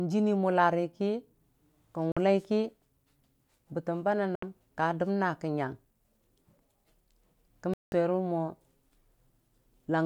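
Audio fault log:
2.12–2.17 s, 4.35–4.43 s, 7.74–7.92 s: likely Bluetooth dropout. Packets missed their deadline at the headphones and were discarded, so the speech cuts to sharp-edged silence for about 46 ms, 70 ms and 186 ms, then resumes further on, as though it had kept playing.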